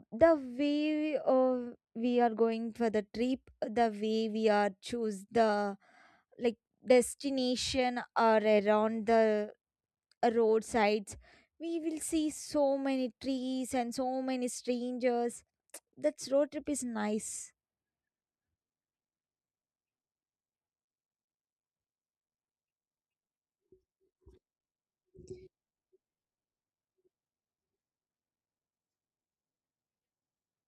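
Right at the start, from 0 to 2.52 s, there's de-emphasis applied wrongly: a treble cut with nothing to undo, dropping about 13 dB by 10 kHz, so the speech sounds dull and muffled.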